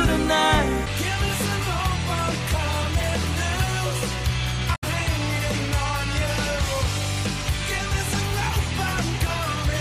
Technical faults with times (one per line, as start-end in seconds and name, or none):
4.72-4.84 damaged data in a compressed stream